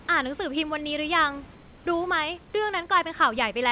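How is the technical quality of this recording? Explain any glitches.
Two glitches stand out in this speech recording, which is band-limited with nothing above 4 kHz, consistent with a G.711 mu-law call path at 64 kbps. Room noise sits about 28 dB under the speech.

From 1.54 to 1.86 s the background goes flat. For about 320 ms the room's texture gives way to a smooth, featureless hiss roughly 3 dB quieter. The room noise then returns when sound resumes. This is likely comfort noise in place of the background. During the pause the sending side stopped transmitting and the receiver generated synthetic noise matched only coarsely to the real background, of the RFC 3389 kind.

At 3.39 s a short, low thump cuts in while the speech carries on undisturbed. It is a DC step: the waveform's zero line suddenly shifts to a new offset, as happens when a converter re-zeros or an offset input switches in. 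A 20 Hz high-pass then pulls the offset back down, so it fades out instead of holding. Only the sudden jump itself is heard, as that thump.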